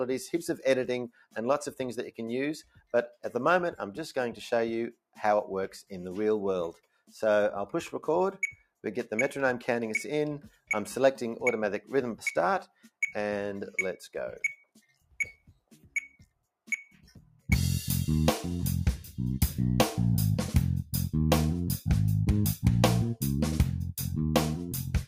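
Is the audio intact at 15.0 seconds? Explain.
No, at 15.0 seconds the noise suppressor cuts the sound between 14.64 and 15.14 s, mistaking it for noise. The level sinks by up to about 16 dB.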